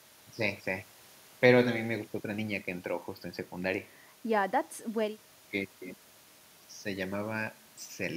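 There are no technical faults to describe at any point in the recording.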